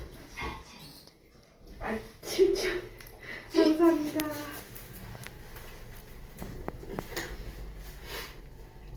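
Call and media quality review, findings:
Grainy, rough texture across the whole clip, tonal parts turning noisy. Little swirl, and content reaches about 20.2 kHz. Likely Opus compression in music (CELT) mode, filling starved bands with folded or noise content, which fits a bitrate near 24 kbps.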